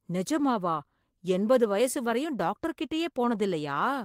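A short speech clip with one lost packet rebuilt from error correction, at 0.77 to 0.79 s. The 20 ms stretch sounds rougher and noisier than the speech around it, but there is no gap or dropout, which fits a packet rebuilt from error correction. The following packet carried a low-bitrate duplicate of the missing audio through Opus in-band forward error correction, and the decoder played that coarser copy in place of the original frame.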